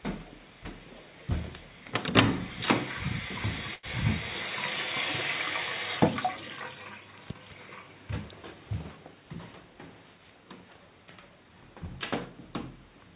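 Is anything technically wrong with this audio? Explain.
Yes, one fault. A short stall from a late packet at 3.74 to 3.86 s: the jitter buffer ran dry, so the last sound was stretched about 92 ms, then resumed without loss.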